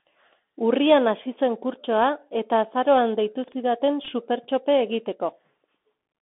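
From the start, the whole clip sits inside the Bluetooth CVSD headset codec. The speech is squeezed into roughly a 200 Hz to 3.5 kHz band, which fits a 64 kbps one-bit-per-sample link. The damage is plainly audible: s sounds turn scratchy, loud bright moments distort, and a granular hiss runs underneath.

At 3.44 to 3.52 s there's a case of chunks out of order. A 40 ms chunk landed one slot late and played after the piece that should have followed it. Nothing's missing, but the three hard joins give a brief jumbled stumble.

At 4.05 to 4.09 s comes a Bluetooth headset packet repeated episode. About 22.5 ms of audio was lost in patches over 30 ms, and the chip re-decoded the last good packet's bits each time. The longest run is only around 10 ms, so you get a short gritty buzz and ticks, not a sustained tone.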